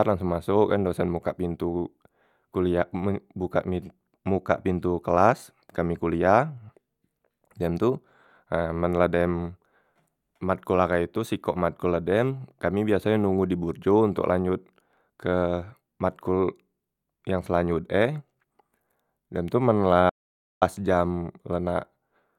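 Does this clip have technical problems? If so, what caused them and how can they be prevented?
Yes. Near the end of the speech, at 20.10 s, the sound cuts off abruptly and drops into total silence, with even the room tone gone, until it resumes mid-flow at 20.62 s. About half a second of speech is simply missing. This audio dropout to silence likely came from the input signal being lost briefly, through a loose connection, a failing link or an accidental mute, while the recorder kept writing silence. Securing cables and monitoring input levels during recording prevents it.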